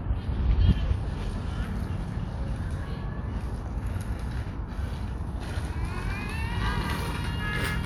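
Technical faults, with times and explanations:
No technical faults can be heard in this recording of sounds, and the signal stays intact throughout.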